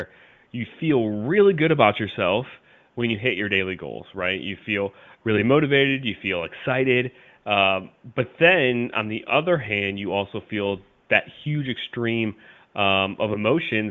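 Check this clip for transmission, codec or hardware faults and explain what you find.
No transmission, codec or hardware faults turn up in this speech clip, which runs over a wideband HD Voice link at what sounds like its top rate of about 23 kbit/s, with faint room noise well beneath the voice.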